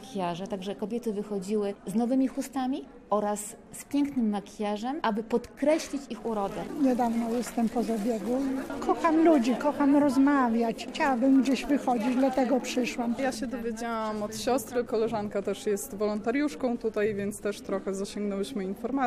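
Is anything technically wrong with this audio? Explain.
No, nothing technically wrong stands out in this audio. No dropouts, distortion or other transmission or processing faults can be heard anywhere in it.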